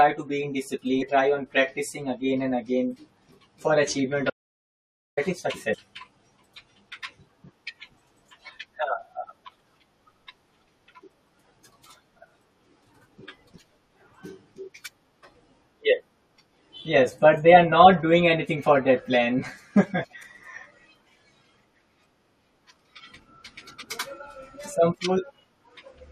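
Compressed frames skipped occur in this speech clip at 1.01 s, between "to be in" and "try on practicing again", then at 5.72 s and 20.03 s. At each point the audio jumps ahead by roughly 200 ms, 150 ms and 300 ms. With a frame length of 23.2 ms, those jumps amount to around ten, seven and ten frames that were missing or rejected by the decoder. An audio dropout to silence runs from 4.3 s to 5.17 s, just after "for achievement". For about 0.87 s the sound cuts to silence with no room tone, and whatever was said in that gap is lost. The likely cause is that the input was briefly lost while the recorder kept writing silence.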